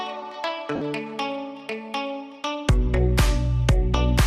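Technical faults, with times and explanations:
0.75–0.81 s, lost LE Audio frames: 52.5 ms of Bluetooth frames dropped, and the LC3 decoder reused the last spectrum with random signs, leaving a brief noisy, fading smear.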